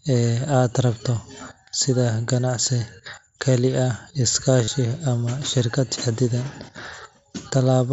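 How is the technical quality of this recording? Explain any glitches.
There's one glitch worth flagging, riding on the mSBC headset link's wideband band limit and faint grain on louder syllables. From 4.64 to 4.68 s there's concealed Bluetooth headset packet loss. For 37.5 ms, enough to suggest a short run of about five lost frames, the receiver loops the best-matching recent stretch of waveform, so you get a brief buzzy held tone at full level and a slight warble as the real signal picks back up.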